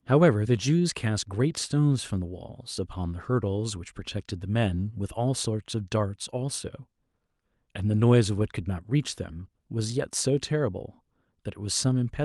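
No technical faults can be heard in this speech. It has come over a working call path, and the high end stops at around 12 kHz, which points to an Opus codec set to that bandwidth.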